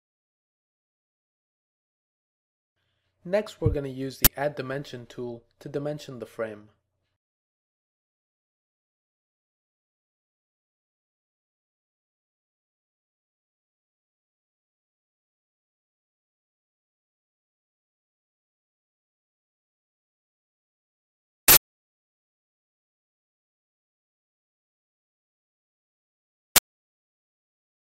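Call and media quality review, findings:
Uninitialised buffer: three short, loud events: cracks at 4.25–4.27 s and 26.56–26.58 s, a burst of digital noise at 21.48–21.57 s. Likely the playback buffer stage, sending blocks out before they were filled. Leftover memory played as samples. Burst lengths (about 21 ms and 85 ms) fit 1024- and 4096-sample blocks.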